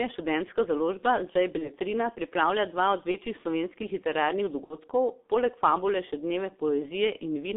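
From the first second to the last, the speech carries G.723.1 codec damage: a narrow 250 Hz to 3.6 kHz line band, hoarse, muffled vowels and smeared consonants, heavy enough to fit a 6.3 kbit/s coder. A plain telephone filter would narrow the sound without this roughness.

At 1.58 to 1.71 s, 3.11 to 3.17 s and 4.64 to 4.79 s, VoIP packet loss concealed by the speech codec appears. Each gap fits one, one, then two lost 30 ms frames. The decoder stretches the last sound into a fading buzzy tone or coloured noise, with weakness lingering afterward, rather than the clean silence of a dropout.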